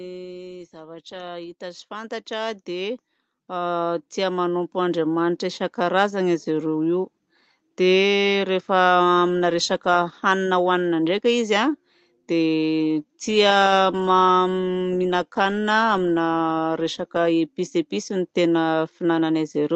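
Right at the start, from 0.05 to 0.75 s, there's automatic gain falling: the gain control decided the input was too hot and eased everything down by about 3 dB, background included. Then from 0.71 to 5.71 s automatic gain rising takes over, the control judging things too quiet and slowly lifting the speech and its background together by about 17 dB over five seconds. All of it comes through the call codec, whose top end stops at about 8 kHz.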